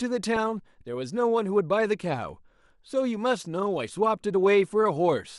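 A speech recording with plainly audible MP2 compression throughout: the sound is dull and carries a gurgling, granular texture, likely from MPEG Layer II coding at a low rate, consistent with about 80 kbps. At that rate upper sub-bands drop out and flicker, and the remaining bands are coarsely quantised. At 0.36 s there is a brief DAB burble. It points to a small fraction of corrupted bits, well under one percent, slipping past error correction into the MP2 stream. Bad samples then put short blips of noise into single sub-bands.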